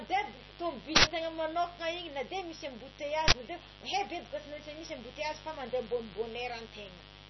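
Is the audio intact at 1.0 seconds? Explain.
No. From 0.96 to 1.04 s, just before "manokana igny na de", an uninitialised buffer plays: a block was sent out before any audio was written into it, so stale memory became samples. The result is an 80 ms burst of digital noise that starts and stops abruptly. Unlike a click or dropout, it has no gap and no smooth edge, only harsh garbage.

A steady, raspy mains buzz also sits under this moment. Switching spikes at twice the 50 Hz mains rate fill the spectrum with harmonics reaching into the kilohertz range, roughly 15 dB below the speech. The raspy edge sets it apart from a smooth, pure hum.

Finally, nothing is present above 5.9 kHz, and the sound is watery, with swirling, smeared consonants. That points to heavy compression, likely MP3 at a very low bitrate, where weak frequency lines flicker between frames. A plain low-pass filter would cut the treble without that swirl.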